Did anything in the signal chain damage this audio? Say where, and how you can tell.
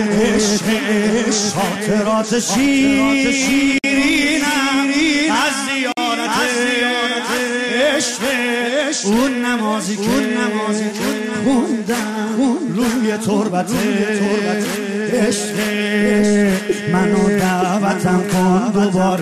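Yes. Two brief silences, at 3.78 s (about 55 ms) and 5.92 s (about 49 ms), are gaps at joins of encoded pieces: separately encoded segments were spliced with their codec start delay and end padding left untrimmed.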